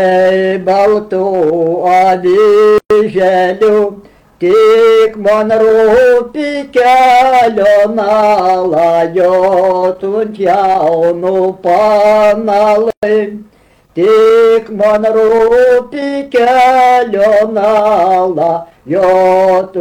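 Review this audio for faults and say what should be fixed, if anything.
Two gaps at a join of encoded pieces, from 2.78 to 2.90 s and from 12.90 to 13.03 s, each a silence of about 123 ms set 10 s apart, with smeared edges. Each piece carried its encoder's start-up silence and last-frame padding into the join. Unlike a dropout, nothing is lost and the sound resumes exactly where it stopped, and the equal lengths at a fixed spacing fit joined pieces. Trim encoder delay and padding before joining, or encode the audio as one continuous run.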